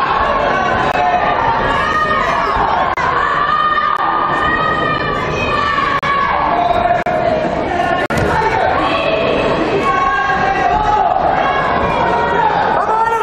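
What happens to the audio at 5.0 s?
A gap between stream segments opens at 4.98 s: the time stamps of two consecutive segments, which appear to be about 1 s long, fail to meet, and the player fills the shortfall with silence. The sound drops out abruptly for roughly 9 ms, with hard edges, then resumes without losing any audio.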